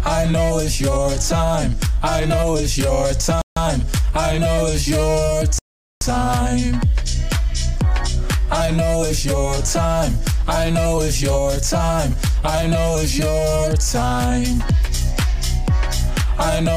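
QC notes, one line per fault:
3.42–3.57 s and 5.59–6.01 s, rebuffering stall. The audio halts twice and drops to silence. The first gap lasts 150 ms. The second runs about 430 ms. Each time the sound resumes at exactly the point where it stopped. Nothing is skipped or repeated. The player had run out of downloaded audio and waited for more data. That waiting adds dead time without removing any material.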